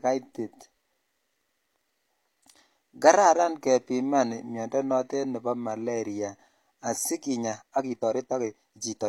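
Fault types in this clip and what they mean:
Time-stretched section: software likely squeezed the final part of the speech to fit a shorter length, dropping short pieces to hold the pitch. From 7.17 s to the end, the pace jumps to 1.55 times normal while pitch stays unchanged, sounding rushed.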